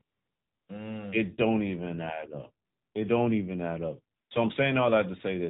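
You've got a short speech clip that's been through the AMR narrowband mobile codec the whole way, and the damage is easy to hear. Nothing gets through above 4 kHz, so it sounds boxed-in and phone-like, and the voice has that buzzy, synthetic edge you get when the vocal-tract model only has a handful of pulses per subframe to work with. That level of roughness points to one of the lower modes, something like 7.4 kbps. There's also AMR comfort noise in three pauses: from 0.02 to 0.68 s (about 660 ms), from 2.66 to 2.94 s (280 ms), and from 4.18 to 4.30 s (120 ms). In each one the sender decided nobody was talking and stopped sending speech frames. The receiving end then filled the gap with smooth, even noise built from a rough level-and-spectrum description, so the real background drops out and gets swapped for a flat hiss that switches in and out at those points.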